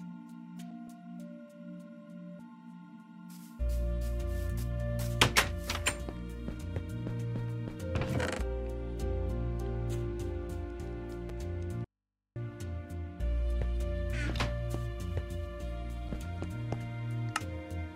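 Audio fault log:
11.85–12.36 s: audio dropout to a faint residue. The sound cuts out abruptly for 0.51 s and returns just as suddenly. Only mains hum fills the gap, about 55 dB below the signal. The likely cause is a break upstream while the later path stayed live on an open input.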